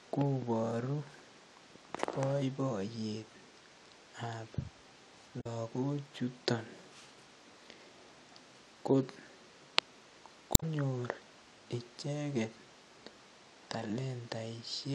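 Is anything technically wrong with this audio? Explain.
Yes. Damaged data in a compressed stream occurs twice, from 5.37 to 5.47 s and from 10.52 to 10.63 s. Corrupted bytes make the decoder misread frames and lose sync while it hunts for the next frame header. Each is heard as a brief chirp, squawk, click or short hole in the speech.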